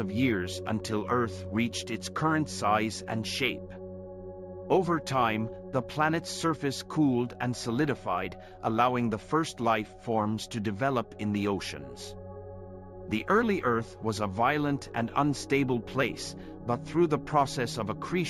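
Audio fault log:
Throughout: imaging from linear upsampling, a 16 kHz to 44.1 kHz conversion by straight-line interpolation leaves faint spectral mirror images between 8 and 16 kHz, roughly 30 dB down, adding metallic shimmer.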